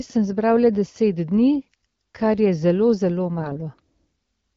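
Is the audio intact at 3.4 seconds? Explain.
No. From 3.37 to 3.66 s the speech turns hoarse and gargly from AMR bit errors: roughly one bit in twenty flipped, misplacing excitation pulses and skewing pitch, gain and spectrum.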